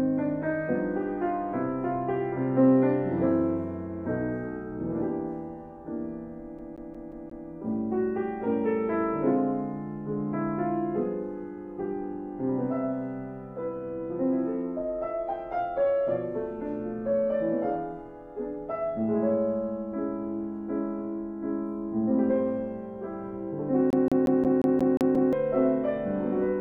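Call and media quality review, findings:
CD stuck on one turn, 6.59–7.48 s and 23.90–25.33 s. Same 178 ms slice of audio repeats 5 then 8 times, short mute at each jump. Disc scratch; laser thrown back one track per revolution. Fast, even skipping-CD stutter.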